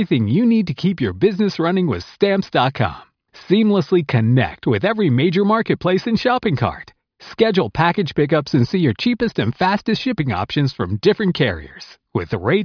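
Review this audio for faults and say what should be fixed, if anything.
No faults found in the speech recording, so nothing needs fixing.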